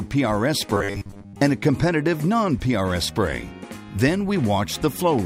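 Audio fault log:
0.74–1.41 s, robotic sound from repeated short buffers: the sound turns into a rigid, metallic buzz at 100 Hz that still loosely follows its original shape. The likely cause is audio arriving too seldom, with the software looping the last short segment, which fits a 10 ms buffer, and skipping most of the real audio in this stretch. A spectrogram shows evenly spaced harmonics at multiples of 100 Hz, and the waveform shows near-identical blocks repeating every 10 ms.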